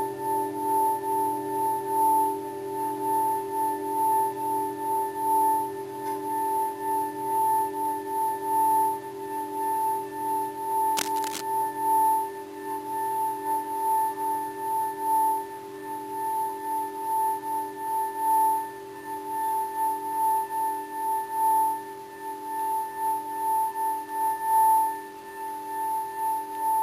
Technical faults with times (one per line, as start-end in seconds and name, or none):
10.97-11.41 cable scratch noise